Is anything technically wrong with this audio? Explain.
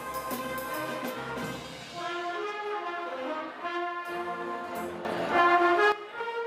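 Yes. A sudden gain jump from 5.05 to 5.92 s raises sound and background noise together by about 11 dB, likely from a gain change applied instantly without any ramp.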